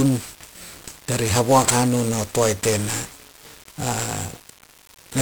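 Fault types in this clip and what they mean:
1-bit DFPWM compression: the whole speech clip is squeezed into one bit per sample, each nudging a running level up or down, so it comes out heavily fuzzy and crackly with the highs drowned in hiss, which fits a low-rate stream of about 48 kbps.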